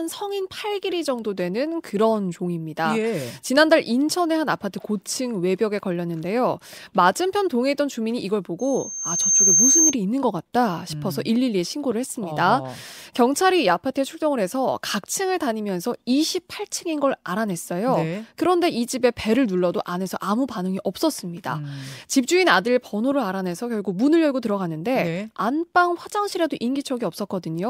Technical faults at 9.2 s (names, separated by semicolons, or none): loudspeaker feedback squeal